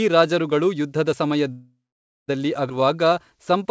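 At 1.52 s the speech stops and a call audio freeze begins, lasting until 2.30 s. The last sound is stretched into a fading buzz that gives way to about 0.52 s of silence. The likely cause is packets held up in transit, leaving the jitter buffer empty. Unlike a dropout, nothing is lost when the speech resumes exactly where it stopped. The 0.76 s pause is inserted, pushing everything after it later.

From 2.70 to 2.72 s comes a skip ahead, the reverse case. Roughly four tenths of a second of speech is discarded. The two sides are spliced almost directly, with no audible pause. That seamless join and the missing material set it apart from the freeze, which leaves a gap but loses nothing.

From 2.81 s to 3.70 s a jitter buffer slow-down drags the speech to 92% speed. Single pitch periods and fragments of pauses are repeated to rebuild the reserve, adding 79 ms. The pitch stays unchanged, so sounds are simply drawn out. 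A tape-style slowdown would lower the pitch, and a freeze would stop the flow outright.

Throughout, the G.722 call path caps the audio at 8 kHz.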